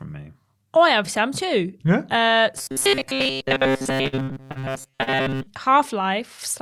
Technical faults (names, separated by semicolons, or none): robotic sound from repeated short buffers; repeated packet loss (robotic sound); short concealed packet loss